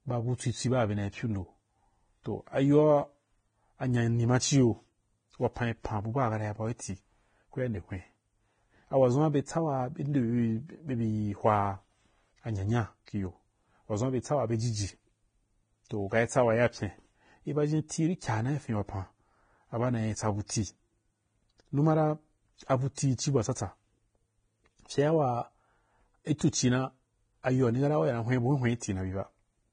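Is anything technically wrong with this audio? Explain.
Yes. Throughout, the speech sounds hissy and grainy, with a dull top end: nothing reaches above 9.7 kHz, and tones and attacks come across rough and blurred. This is likely heavy Vorbis compression at a low bitrate, which cuts the treble and quantises the remaining detail so coarsely that it turns into noise.

Pre-echo appears from 22.95 to 22.97 s (27 ms) and from 26.38 to 26.41 s (23 ms). A brief hiss runs just ahead of a sharp attack, softening its onset, because quantisation noise sized for the loud transient spreads backwards across its coding block into the quieter moment before it.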